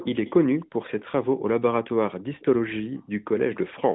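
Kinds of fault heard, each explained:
Echo leak: faint, delayed copies of the speech surface in brief scraps at 0.0, 0.25, 0.59, 1.0, 2.15 and 3.55 s, each well under a tenth of a second and trailing the original by about 0.3 s. They sit far below the speech, roughly 15 to 30 dB down. The likely cause is a far-end echo canceller letting loudspeaker pickup slip back. Unlike room reverb, these are discrete repeats at one fixed delay, not a smooth decaying tail.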